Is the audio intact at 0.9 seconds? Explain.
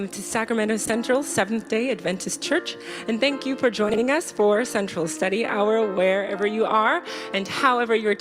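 No, there's a brief garbled flutter from 0.85 to 0.90 s: frames out of order, two adjacent 20 ms blocks played in swapped sequence.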